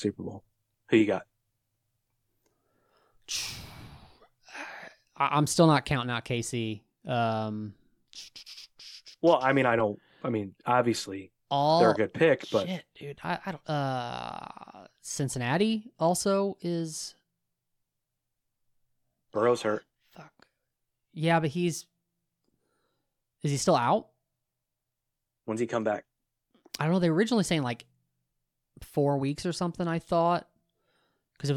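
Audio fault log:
5.92 s to end: sudden gain jump; speech and background noise drop together by about 4 dB at once, likely from an unramped gain change.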